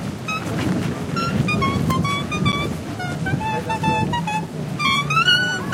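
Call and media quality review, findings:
Block of digital silence at 2.52 s: a 10 ms hole heard as a tick or dip. Probable audio output path missed its buffer deadline; samples zeroed. Hard cut, not a faded or concealed dropout.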